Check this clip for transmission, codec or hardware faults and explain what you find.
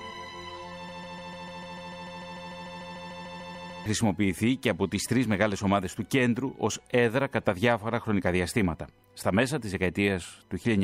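There's one clear fault here. From 0.89 s to 3.86 s you get a broken-record loop: a 148 ms fragment repeats exactly, back to back, 20 times. Likely the player or stream stalled and kept resending its last buffered piece, so whatever audio belonged in that stretch is gone.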